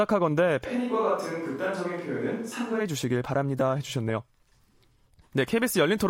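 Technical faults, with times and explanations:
0.67 to 2.79 s, switch to a distant microphone: the speech abruptly turns roomy and hollow, loses low end, drops about 5 dB, and gains a background bed sitting roughly 30 dB under the speech, then snaps back just as suddenly. This is likely a failed close microphone with a farther one covering the gap. Unlike a plain gain dip or a muffling filter, the room's reflections and noise change together at both sharp boundaries.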